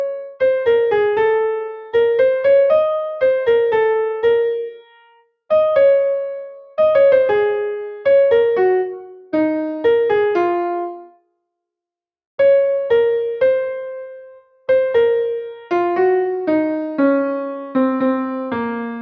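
Sound cut by the noise suppressor at 4.7 to 5.32 s and again at 11.09 to 11.32 s: the suppressor mistook steady sound for noise and pulled it down by about 19 dB, so the level sinks and tails end early while sharper onsets still come through.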